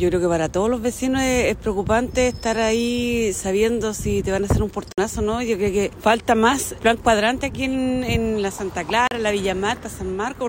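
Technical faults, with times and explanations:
4.92–4.98 s and 9.07–9.11 s, Bluetooth stall: the sound drops to silence for about 55 ms, then 39 ms, likely because interference delayed packets and the headphone buffer ran empty.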